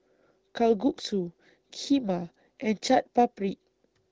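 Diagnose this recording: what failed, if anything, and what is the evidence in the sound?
Nothing failed in this recording.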